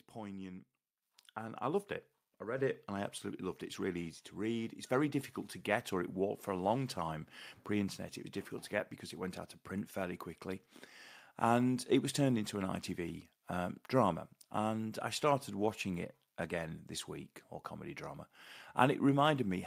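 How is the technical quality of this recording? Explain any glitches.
The recording has a level fault: the microphone volume stepped up twice, at 1.02 s by about 8 dB and at 2.58 s by about 4 dB. Each time, the call software raised the input volume in one step, so the speech and background noise jump louder together.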